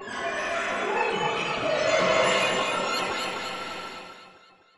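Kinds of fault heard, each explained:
Audio read two samples at a time (double speed): The sound plays twice as fast and a full octave, 12 semitones, higher. The reader treats each pair of samples as one frame, racing through the data.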